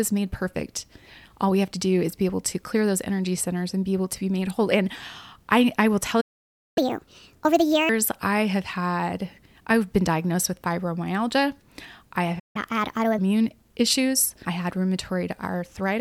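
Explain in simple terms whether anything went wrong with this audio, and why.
The speech cuts out twice in mid-flow: silence from 6.20 to 6.78 s (about 0.56 s) and again from 12.39 to 12.56 s (about 0.15 s). These are playback stalls. The player likely ran short of data, or was held up, and went quiet until it recovered.

Right after each gap the speech rushes and sounds higher, like a sped-up recording. From 6.78 to 7.89 s it runs 1.5 times faster and about seven semitones higher, and from 12.56 to 13.18 s it runs 1.25 times faster and about four semitones higher. This is catch-up at higher speed. The player hurries through the audio that piled up during the stall to win back lost time, then returns to normal.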